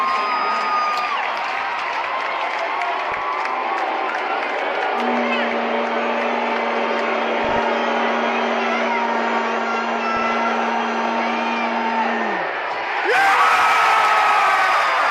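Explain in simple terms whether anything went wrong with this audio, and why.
Something did go wrong, in three short bursts of DAB burbling: 3.1 to 3.21 s, 7.4 to 7.61 s, and 10.15 to 10.4 s. Weak digital radio reception let corrupted data slip past error correction, producing short blips of noise in individual frequency bands on top of the sound. Unlike a dropout, the audio doesn't go silent during these bursts. It keeps playing with the blips layered over it.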